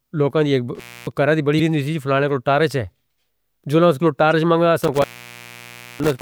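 At 0.75 s a loose cable or plug in the chain lets go: this is intermittent contact. The connection stays open for about 273 ms before it seats again around 1.12 s, just ahead of "کرہ دی". While the circuit is broken the speech drops out to a faint hiss, and the make and break at either edge come through as crackle.

Between 1.56 and 1.60 s, right after "کرہ دی" and before "ہونی تھی فلانے کو", there is damaged data in the compressed stream. Corrupted bytes throw the decoder out of sync, so it misreads what it finds and hunts for the next valid frame header. The result is a short glitch where decoding breaks.

The same corruption recurs at 4.30 to 4.33 s, immediately after "جلن اس کو". Again the decoder loses its place, producing a brief glitch.

From 4.81 s to the end, the intermittent contact returns and the line opens for roughly 946 ms in total within that stretch. Speech cuts away to hiss while the contact is open, and the edges of the gap carry the same crackle.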